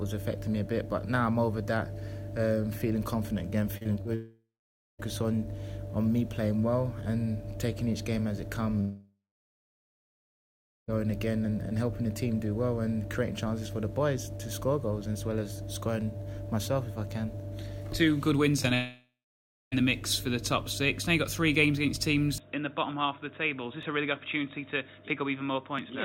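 Choppy stutter from 3.77 to 4.07 s is repeated packet loss (robotic sound): four gaps, the longest 33 ms, covering about a third of that stretch, each patched by extending the last sound. A fading buzz that drops into silence appears three times, at 4.15 to 5.01 s (about 0.54 s silent), 8.81 to 10.90 s (about 1.72 s silent) and 18.74 to 19.74 s (about 0.61 s silent), and each is likely a long network dropout, with the audio returning minus the lost part. Small jumps forward at 16.01 s, 23.83 s and 25.79 s, each skipping a few milliseconds of sound, are likely a dropped buffer (overrun), where unread samples were overwritten and the edges spliced together. A brief smear at 18.63 to 18.66 s is short concealed packet loss, where about 20 ms never arrived and was filled by continuing the preceding sound. From 22.38 s to the end the sound turns dull and boxy, about 5 dB quieter and with new background noise roughly 35 dB down, with no gap at the change, which points to the input likely switching to a poorer device.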